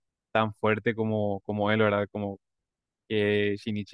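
A short recording of speech, with no technical fault heard anywhere in it. There is nothing to time and no cause to point to.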